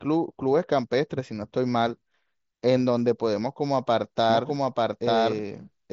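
A doubled audio track begins at 4.30 s and runs to the end: a second full-band copy enters abruptly, equally loud and roughly a second late, likely from an edit holding two out-of-step copies.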